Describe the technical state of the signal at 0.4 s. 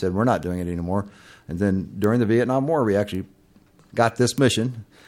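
At 0.43 s, between "we're not" and "doing it anymore", a bit error spike jumps three samples to about -19 dBFS. The flipped bit gives one sharp broadband tick.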